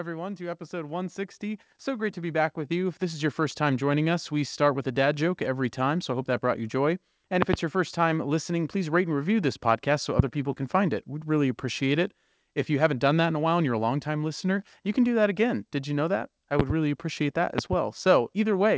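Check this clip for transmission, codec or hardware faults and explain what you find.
Two kinds of fault are present in this speech clip: a slow gain rise near the start, and a series of loud pops later on.

From 0.35 to 6.72 s the speech and the background noise swell together, climbing by about 10 dB over several seconds rather than jumping. This is automatic gain rising. The automatic gain control judged the incoming level too quiet and kept turning its gain up step by step. Because the gain acts on the whole signal, the room noise grows along with the speech.

Loud pops cut sharply through the speech four times, each standing far above it, roughly 20 dB or more. A double pop comes at 7.42 to 7.56 s, a single one at 10.19 to 10.22 s, another double at 16.60 to 16.73 s, and a final double at 17.58 to 17.75 s. The speech carries on underneath each one. The likely cause is a sudden voltage step or spike from a plug, switch, static discharge or driver glitch, which the following circuitry shapes into a brief thump, sometimes with a second pulse right after.

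The call path itself shows its expected band limit, with nothing above 8 kHz, which fits G.722 at 64 kbps.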